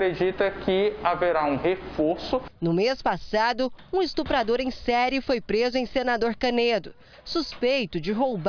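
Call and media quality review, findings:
No audible faults found in review; no ticket findings to raise.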